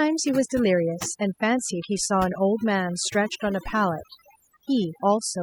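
Speech with overdone noise removal throughout: bands near the estimated noise floor are gated off, leaving near-silent pauses with twinkling specks.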